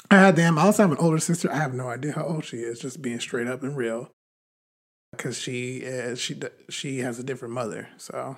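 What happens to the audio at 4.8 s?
A clipped start after a pause spans 4.71 to 5.13 s. The output device, idle through the 0.66 s silence, wakes late, swallowing 0.42 s, so speech bursts in abruptly.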